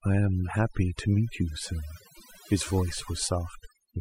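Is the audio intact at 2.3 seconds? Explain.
No. Overdone noise removal runs through the whole clip, including 2.3 s: an overly aggressive noise reducer drives individual frequency bands close to silence wherever they resemble its noise estimate, taking quieter speech detail along. The background drops and breaks up into twinkling specks.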